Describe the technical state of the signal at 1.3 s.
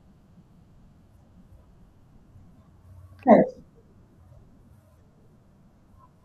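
At 1.3 s the speech signal is intact, with no audible fault at that moment.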